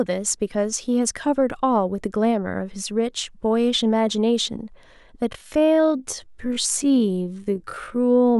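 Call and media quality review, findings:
Time-stretched section, 5.26 s to end of clip. Speech pace drops abruptly to about 0.55x while pitch holds. Audio drags. Likely cause: a length-fitting stretch in the processing chain. It slowed the tail by repeating short overlapping pieces instead of resampling, so pitch is preserved. Component to check: any time-scale or duration-matching stage applied before delivery.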